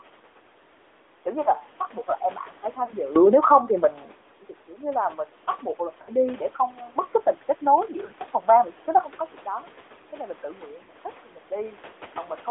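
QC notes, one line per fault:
Throughout: gain pumping. The background swells by a few decibels in each pause and ducks under every loud syllable, so loud and soft passages sit unnaturally close in level and the sound feels squashed. The likely cause is input gain set far too high, with a fast limiter or compressor clamping each peak. The room noise, about 31 dB below the speech, rises and falls with it. On a waveform the envelope looks flattened and the noise floor breathes between phrases. A spectrogram shows the low-level band brightening in gaps and dimming under speech.
Throughout: AMR narrowband mobile codec. The speech has the plainly audible buzzy, slightly synthetic quality of the 2G/3G AMR-NB codec. The texture fits a mid-rate mode around 10 kbps. The line passes only about 300 Hz to 3.6 kHz, so the speech is thin and boxy, lacking both low body and sibilant air. The codec rebuilds each 20 ms frame from a vocal-tract model and a few pulses, which is what gives it the buzz. 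On a spectrogram, energy is sharply cut off above 3.6 kHz and below 300 Hz. Harmonics look smeared and slightly blocky frame to frame.
2.86 to 2.93, 6.02 to 6.11, 8.06 to 8.13, 10.84 to 10.91 s: lost AMR speech frames. At each point the decoder has no valid frame and repeats the last good pitch and vocal-tract settings at falling gain. That gives a brief frozen, warbly smear and a dip in level, followed by a moment of weak, rough sound as decoding recovers. The gaps last 20, 60, 40 and 40 ms, which fits one, three, two and two frames lost. On a spectrogram the harmonics freeze into flat horizontal stripes that fade. The waveform shows a short sagging envelope.
9.05 s onward: sudden gain jump. The level drops by about 12 dB in a single step and stays down to the end, with speech and background falling together. The likely cause is a digital gain setting or bit shift applied instantly instead of ramped. 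On the waveform the amplitude steps down abruptly at 9.05 s. On a spectrogram every band, including the noise floor, darkens at once along a sharp vertical edge.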